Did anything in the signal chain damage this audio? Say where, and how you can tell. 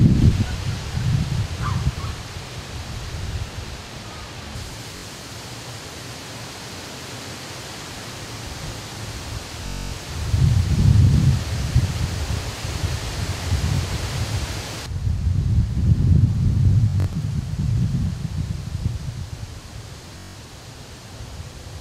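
Yes. The Bluetooth link lost or delayed audio packets, so the receiver kept replaying its last short buffer. This is a Bluetooth stutter, heard as a repeated slice of roughly 21 ms. It is a brief buzz at 4.97–5.05 s and a single repeated slice at 13.76–13.79 s, and a longer machine-gun run at 9.66–9.93 s, 16.90–17.16 s (broken into bursts) and 20.18–20.36 s, with the sound then resuming further along.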